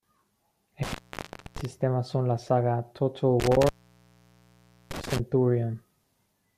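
Intermittent contact occurs twice in this speech, first from 0.83 to 1.65 s and again from 3.40 to 5.20 s. A loose plug or cable connection momentarily loses contact, so the signal drops out with a crackle at each edge. Faint hiss remains while the line is open. The first break leaves the speech silent for about 0.63 s, and the second, longer one lasts about 1.22 s.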